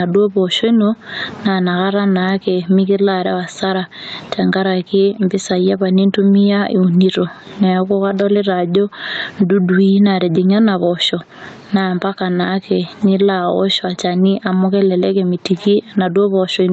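Gain pumping runs throughout: the gain swings about 20 dB under loud speech, likely excessive gain driving a fast limiter.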